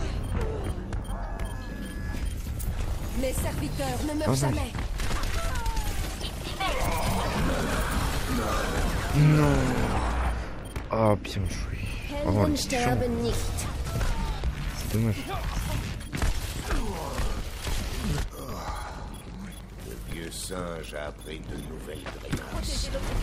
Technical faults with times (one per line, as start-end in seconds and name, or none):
5.65-23.10 train of clicks